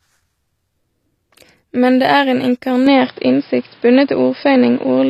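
From the start, the speech appears to have gone through HE-AAC compression, likely at a low rate around 24 kbps. Spectral band replication synthesises the treble from lower bands, and the top end is cut off above 14.9 kHz, and s sounds come out gritty and metallic, with plainly audible codec damage.

At 2.87 s the system likely switched its input to a poorer device, which stays in use to the end. There is no gap at the switch. The band suddenly stops near 5.2 kHz, making the speech dull and boxy. The level shifts by roughly 5 dB, and a new faint noise floor sits well below the speech.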